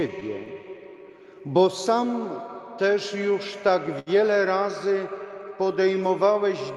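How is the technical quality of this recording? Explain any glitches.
The timing is unsteady throughout, with small hiccups and one brief held sound, all from a mismatch between the sending and receiving clocks. The audio itself passes through a call codec whose top end stops around 12 kHz, which fits an Opus stream at roughly 64 kbps.

Clock drift between sender and receiver runs through the whole clip. The pace never quite settles and small hitches recur at irregular spacing. The sender's clock appears to run slow by about five percent relative to the receiver. The receiver's jitter buffer therefore keeps running low, and the receiver has to pad the stream to avoid running dry, so the audio carries a faint, persistent unevenness rather than one clear defect.

Repeated timing corrections span 0.54 to 6.35 s. They are heard as a slightly dragging, uneven tempo with occasional tiny repeats. 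The playback runs at about 96% speed as the receiver stretches and repeats short fragments to keep up with the slower sender. Together these edits add roughly a fifth of a second. Each correction is small, but all of them push the same way, so the sound feels faintly sluggish.

A short stall from a late packet occurs at 3.99 to 4.10 s. One sound is held unnaturally long, with a slight buzzy or flattened quality. A packet arrived late, the jitter buffer emptied, and the receiver extended the last sound for 72 ms until the data turned up. Playback then resumed from the same point. Nothing is lost, but the delay grows by those 72 ms, producing a brief sustained smear.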